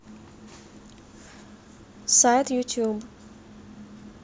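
No technical faults can be heard anywhere in the speech.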